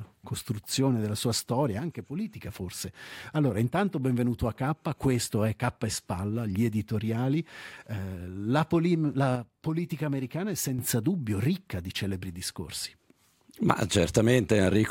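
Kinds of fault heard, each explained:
One channel drops out: the sound suddenly falls by about 6 dB and stays lower, from 1.79 to 2.33 s and again, for longer, from 9.35 to 10.79 s, then snaps back to its former level each time. The likely cause is one stereo channel briefly going silent. When the two channels are summed to mono, the material they share loses half its contribution, which is the abrupt 6 dB step heard here.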